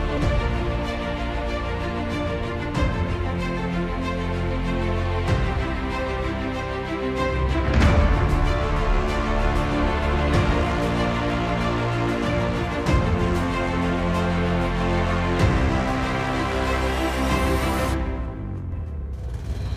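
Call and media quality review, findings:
Nothing to flag here: had a listen through and there's no audible problem anywhere in the clip.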